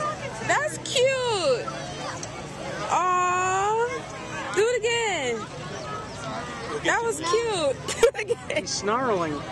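No technical faults are audible anywhere in this audio.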